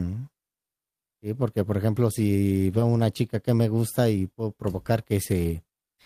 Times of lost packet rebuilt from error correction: 2.71-2.81

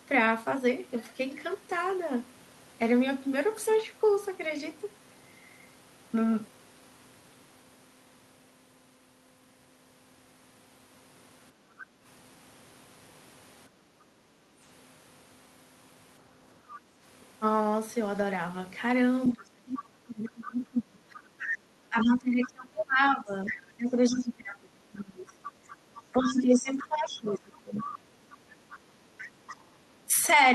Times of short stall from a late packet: none

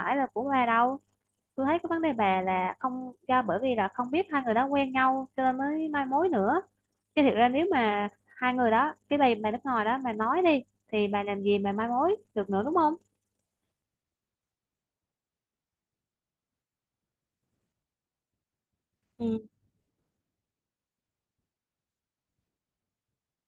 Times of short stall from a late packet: none

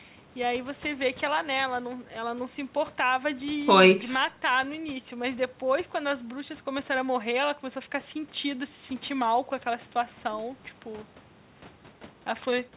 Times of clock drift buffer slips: none

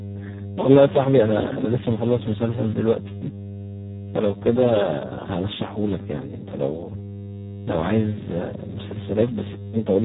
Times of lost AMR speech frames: none

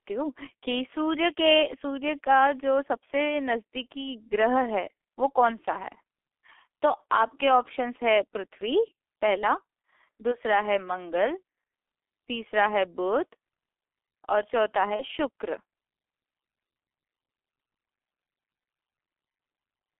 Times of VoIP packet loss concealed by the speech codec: 14.96-15.04

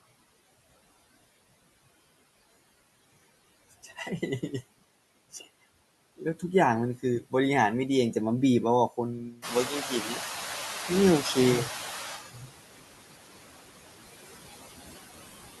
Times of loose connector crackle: none

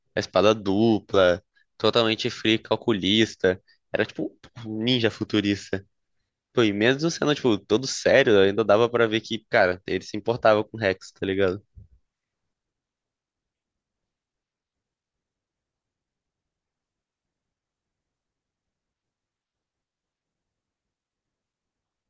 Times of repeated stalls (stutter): none

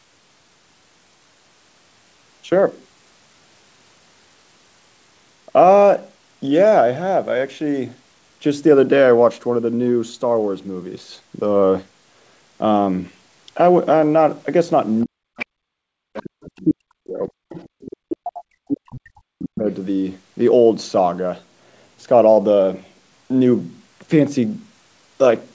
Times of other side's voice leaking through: 15.38-15.46, 16.14-16.64, 17.53-18.16

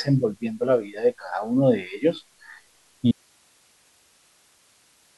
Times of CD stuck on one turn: none

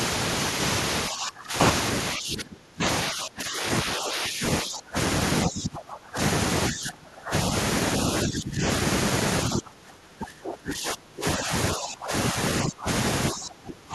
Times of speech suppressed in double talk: 1.09-1.54, 2.17-4.97, 5.45-6.19, 6.70-7.33, 8.23-8.66, 9.48-12.88, 13.31-13.95

